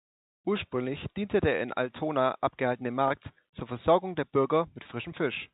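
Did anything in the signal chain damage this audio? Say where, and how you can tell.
Yes. Network packet loss with pitch repetition at 3.08 s and 4.83 s: each 20 ms gap is bridged by a repeated pitch period, giving a brief held, buzzy tone.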